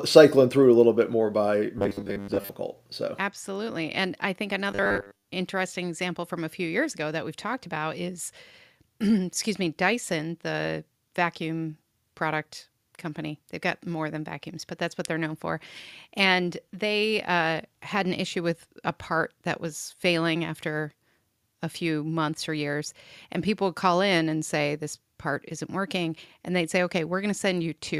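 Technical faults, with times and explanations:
1.78–2.49 s and 4.71–5.28 s, robotic sound from repeated short buffers: right after "little bit more by" and again after "absolutely and i think", the speech collapses into a stiff, metallic buzz locked at 100 Hz that only loosely tracks the words. The likely cause is audio arriving too slowly, so the playback loops the last 10 ms chunk over and over while most of the real signal, around two thirds, gets skipped.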